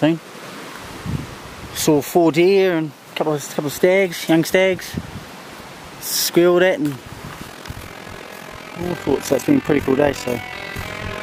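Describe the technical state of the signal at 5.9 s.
Around 5.9 s the signal is intact, with no audible fault at that point.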